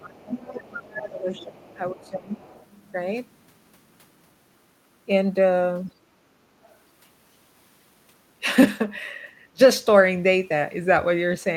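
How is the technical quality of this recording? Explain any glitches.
The recording has two related problems, both from the echo-cancellation side of a call, and they're worst in the first couple of seconds.

Speech suppressed in double talk: from 0.0 to 2.39 s the talker's level sinks, by about 20 dB at its deepest, across roughly two seconds. It happens again briefly at 6.48 to 6.54 s, and at 9.51 to 9.61 s with a deeper dip of about 30 dB. The likely cause is the canceller hearing both parties at once, failing to tell the near voice from loudspeaker echo, and clamping down on everything.

Other side's voice leaking through: a second voice sits under the talker from 0.2 to 0.61 s and from 0.92 to 2.67 s, about 15 dB down. Fainter scraps turn up at 5.87 to 5.92 s, about 40 dB down, and 6.64 to 6.77 s, about 35 dB down. That's likely the far end playing on the device's speaker and not fully subtracted from the mic signal.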